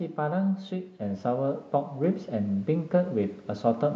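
At 1.02 s the microphone volume steps up by about 4 dB. Input gain was raised at once, so speech and background jump together, unlike a speaker talking louder.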